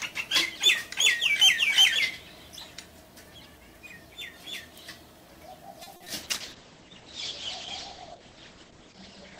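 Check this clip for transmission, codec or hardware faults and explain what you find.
Three kinds of transmission fault appear close together, starting around the 6 s mark, with the last continuing to the end.

At 5.83 to 5.88 s there is a short stall from a late packet. The jitter buffer ran dry, and the receiver stretched the last sound by 30 ms until the data arrived. Nothing was lost, but the sound is held slightly too long.

Short concealed packet loss follows at 5.96 to 6.02 s (40 ms) and 6.04 to 6.08 s (20 ms). The decoder extrapolated from the preceding audio to fill each gap, leaving brief smears or wobbles where real content is missing.

From 6.23 s to the end, a call bitrate drop cuts the stream from 48 to 9 kbps. The encoder then codes more coarsely and narrows the bandwidth from 20 kHz to 8 kHz, so the sound turns rough and muffled.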